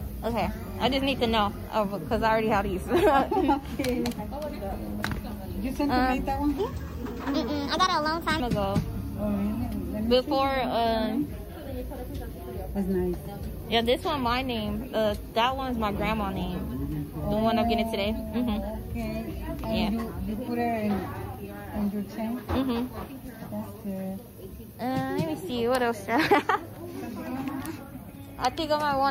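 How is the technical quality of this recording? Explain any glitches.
One glitch stands out: a section at the wrong speed from 6.58 to 8.40 s. For those 1.8 seconds the audio was likely played back against the wrong clock, running 1.3 times faster than recorded. Because speed and pitch are tied together in plain playback, everything in that stretch rises by about five semitones and hurries along, sounding thin and chipmunk-like, then drops back to its natural pitch and pace when normal speed resumes.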